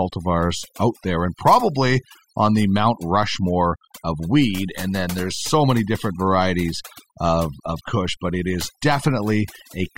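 From start to finish, the speech carries overdone noise removal: a suppressor set too aggressively pulls individual frequency bands down whenever they sit near its noise estimate. The background collapses into near silence dotted with twinkling specks. Unlike a noise gate, it removes narrow bands rather than muting everything at once.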